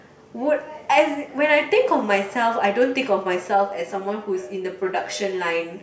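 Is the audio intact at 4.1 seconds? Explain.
No. From 3.54 s to 5.82 s, channel delay (comb filtering): one channel lags about 10 ms, so the mono sum cancels at evenly spaced frequencies from around 50 Hz. The speech sounds hollow, and a spectrogram shows fixed horizontal notch stripes.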